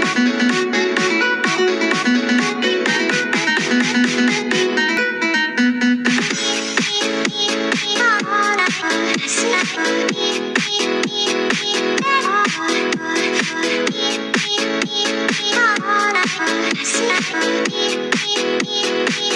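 Nothing technical stands out here, so there's no fault to point to anywhere in this audio.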